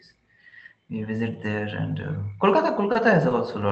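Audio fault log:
2.92–2.97 s and 3.29–3.33 s, short stall from a late packet: twice a packet arrived late and the jitter buffer ran dry, so the receiver held the last sound in place, for about 30 ms and then 20 ms, until the data came. Playback then resumed where it had stopped, so no speech is lost. Instead, a sound is briefly drawn out with a faint buzzy or dipped quality, and the timing lags slightly at each point.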